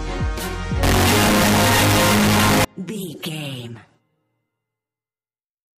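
Float read as integer from 0.83 to 2.65 s: the audio abruptly turns very loud and harsh, with the waveform flattened into a nearly square shape sitting at an almost fixed, high level, and quiet background noise pushed up to the same level as the main sound. The likely cause is 32-bit floating-point samples being read as 32-bit integers, so each sample's sign and exponent bits, not its actual amplitude, set the output level.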